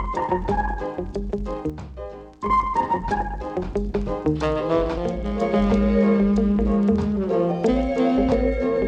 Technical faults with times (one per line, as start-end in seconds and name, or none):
1.70-2.46 one channel drops out
4.98-5.41 one channel drops out